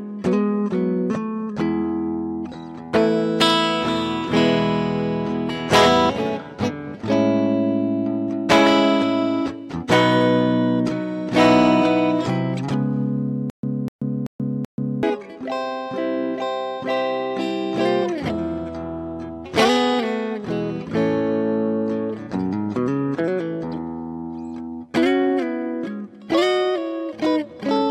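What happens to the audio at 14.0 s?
At 14.0 s the audio hits a stutter with silent gaps, from 13.50 to 15.03 s. A likely stalled stream replays the same 249 ms burst four times, each followed by 134 ms of dead silence. On a waveform or spectrogram, identical blocks repeat every 383 ms, separated by flat empty strips.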